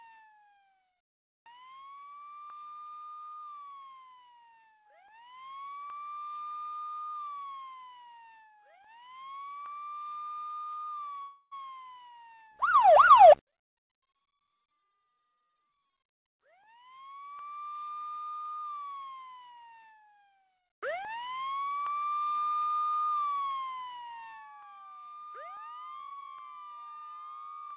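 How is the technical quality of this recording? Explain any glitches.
The recording carries two call-network glitches, over a band that stops at 4 kHz, which fits G.711 mu-law coding.

From 11.22 to 11.53 s there is a call audio freeze. The last sound stretches into a fading buzz or hiss over 294 ms, ending in 30 ms of silence, and the audio resumes with nothing lost. The likely cause is delayed packets draining the jitter buffer. A spectrogram shows the final spectrum smeared flat and fading.

From 14.72 to 17.44 s a jitter buffer speed-up runs the audio at 110% speed at the same pitch, so it sounds hurried. To shrink a backlog, the receiver cut many short pitch-period pieces, about 0.3 s in total. The spectrogram shows events squeezed closer in time while their frequencies stay put.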